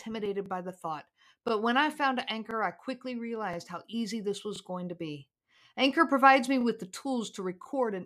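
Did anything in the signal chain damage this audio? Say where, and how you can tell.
Yes, there are overlapping chunks at the buffer or chunking stage. There's a stutter at 0.46–0.48, 1.48–1.51, 2.51–2.53 (right after "when I found"), 3.53–3.56 (after "I quickly"), 4.56–4.58, 5.58–5.61, 6.61–6.63 and 7.63–7.66 s. That's exactly once a second, so the speech was cut into 1 s blocks and each block starts about 25 ms before the previous one ended. That 25 ms plays twice at every join.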